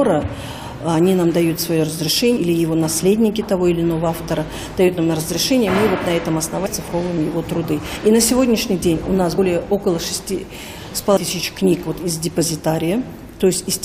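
Brief smeared blips at 2.36, 6.65, 7.95, 9.37 and 11.16 s mark forward jumps of about a tenth of a second up to about 0.4 s at 11.16 s. These are compressed frames skipped: whole frames, fitting a frame length near 23 ms, never play, and overlap blurs each join.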